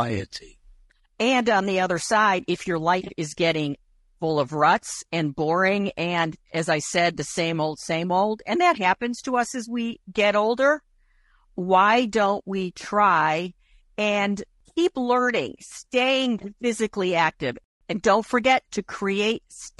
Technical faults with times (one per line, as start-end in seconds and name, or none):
0.00-19.79 low-delay AAC compression